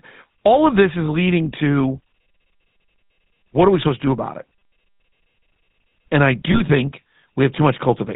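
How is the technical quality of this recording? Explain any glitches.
The recording is clearly degraded by a low-bitrate phone codec, with two brief glitches on top.

Throughout, the sound has the buzzy, gravelly roughness of the GSM full-rate codec, and the codec damage is plainly audible. The codec rebuilds the vocal tract from a model driven by evenly spaced pulses, keeping only a third of the excitation samples, and passes nothing above 4 kHz. This fits 13 kbps full-rate GSM. Unlike simple band-limiting, which only sounds muffled, this adds a grainy, synthetic texture to the speech.

At about 1.06 to 1.09 s, between "of this is" and "leading to", and again at about 6.52 to 6.62 s, there are lost GSM frames. Each event points to a single missing 20 ms frame. The decoder fills the gap by reusing the last good frame's settings, so the sound briefly holds as a short metallic ring. A plain dropout would instead leave silence or a click.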